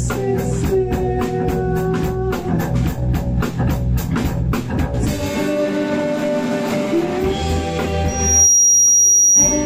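Loudspeaker feedback squeal from 8.08 s to 9.65 s: the microphone catches its own loudspeaker, and at 5.8 kHz the loop gain tops unity. That tone swells over roughly 0.4 s into a piercing squeal, a few decibels louder than the surrounding sound.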